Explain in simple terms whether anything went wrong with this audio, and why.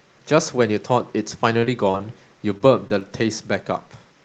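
Yes, two kinds of network fault can be heard in this speech, both on an internet call path that carried it through a compressed call codec.

From 1.59 to 2.02 s there is repeated packet loss (robotic sound). Four separate chunks of audio arrived too late or not at all, the longest about 26 ms. Each time, the receiver covered the hole by stretching out the last bit of sound it had. About a fifth of that stretch is patched rather than real, so the speech turns choppy there.

Shortly after come two isolated dropouts, each a short concealed packet loss: one at 2.58 to 2.62 s and another at 2.88 to 2.92 s. In each, about 20 ms of audio went missing and the receiver papered over it with a brief continuation of the preceding sound before blending back into the real signal. These come across as a quick smear or wobble, short enough that a consonant could slip away.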